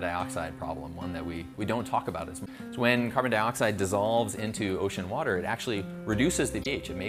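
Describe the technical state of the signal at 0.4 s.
At 0.4 s the signal is intact, with no audible technical fault at that moment.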